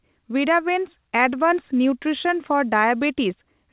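No technical faults are audible.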